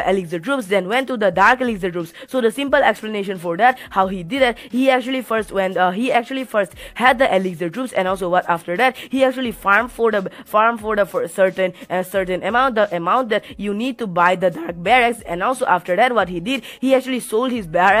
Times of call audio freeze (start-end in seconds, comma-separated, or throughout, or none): none